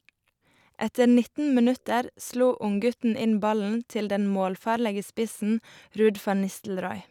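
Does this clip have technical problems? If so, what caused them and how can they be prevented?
No, there are no technical problems to point to in this speech clip. With nothing gone wrong, there is no cause to trace and nothing here that needs preventing.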